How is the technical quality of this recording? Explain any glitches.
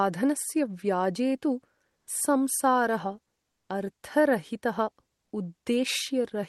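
The recording has passed through a call codec, with the spectrum ending around 12 kHz, and shows two short patches of comfort noise in place of the background. At 1.97–2.07 s (100 ms) and 3.51–3.69 s (180 ms), the quiet room tone, sitting about 57–58 dB below the loudest sound, turns into a flat, featureless hiss about 1–2 dB quieter. The likely cause is discontinuous transmission, with the receiver synthesising noise while the sender paused.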